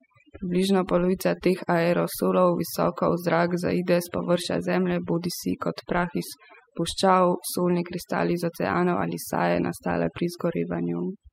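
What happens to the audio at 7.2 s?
At 7.2 s you're hearing overdone noise removal, though it isn't specific to that moment; it runs through the whole clip. The noise reduction was pushed too hard, so any frequency band that dips near its noise estimate gets pulled way down or switched off, taking the quieter bits of the voice with it. That's why the background drops and breaks up into little twinkling specks.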